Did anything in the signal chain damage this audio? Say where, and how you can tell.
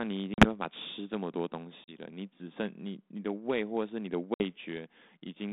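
Yes, at the network stage: packet loss on an ADPCM call. Hard-edged silences of 40 ms at 0.34 s and 1.84 s and 60 ms at 4.34 s, each a few packets, are followed by slightly distorted speech until about 0.46, 1.97 and 4.44 s. Unlike plain dropouts, the 32 kbit/s G.726 decoder's predictor and step size must resynchronise afterwards.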